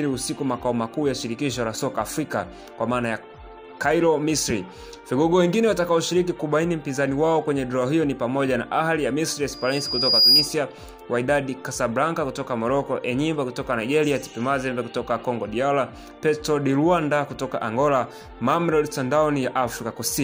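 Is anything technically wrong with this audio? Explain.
Yes. From 9.52 to 10.55 s there is loudspeaker feedback squeal: a microphone is picking up the loudspeaker it drives, and at about 4.9 kHz the gain around that loop exceeds one, so the tone reinforces itself on each pass. It is heard as a pure, piercing whistle that swells over well under a second until it sits roughly 10 dB above the rest of the sound.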